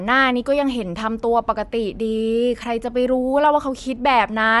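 Throughout the speech, nothing reaches above 11.5 kHz, and the upper range sounds plainly breathy and grainy, its fine detail replaced by filled-in noise. This points to Bluetooth LC3 compression, likely with 10 ms frames at a rate that fits roughly 48 kbps.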